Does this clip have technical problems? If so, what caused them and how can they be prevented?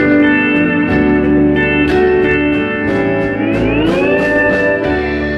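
Yes, there's a short concealed packet loss at 2.49 to 2.53 s: about 20 ms never arrived, so the decoder extrapolated the last sound, leaving a brief smear. A steadier network path or a larger jitter buffer would help prevent it.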